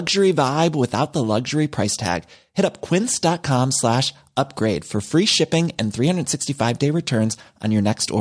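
No technical fault can be heard anywhere in the speech recording. No moment stands out as needing a timestamp or an explanation.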